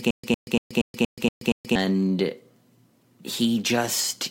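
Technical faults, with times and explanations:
0.00–1.75 s stutter with silent gaps: a 106 ms burst repeats seven times with 129 ms silences between, likely a stalling stream replaying its last fragment.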